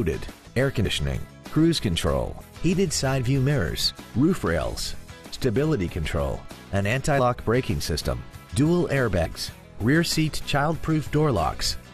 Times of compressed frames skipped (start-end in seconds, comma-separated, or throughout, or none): 0.84, 7.18, 9.24-9.26